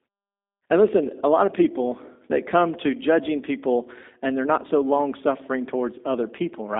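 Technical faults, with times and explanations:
Throughout, G.729 codec: speech is confined to roughly 250 Hz to 3.7 kHz and sounds plainly rough and synthetic, which fits 8 kbit/s model-based coding rather than simple band-limiting; pauses fall cleanly silent.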